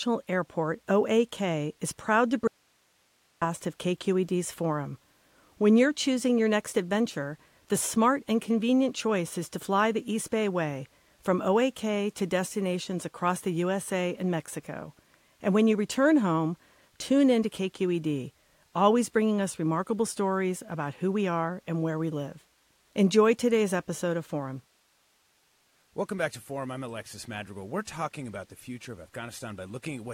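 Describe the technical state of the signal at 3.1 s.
At 3.1 s the signal is in the middle of an audio dropout to a faint residue, running from 2.48 to 3.42 s. The wanted signal was likely lost upstream while the rest of the path stayed live. Just after "is proud to", the speech cuts off abruptly for about 0.94 s, leaving only hiss roughly 40 dB below the normal level, then snaps back mid-flow rather than fading in.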